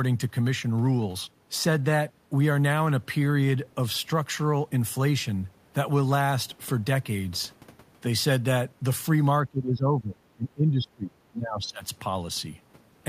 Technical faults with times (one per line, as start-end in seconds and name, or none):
9.43-11.85 speech suppressed in double talk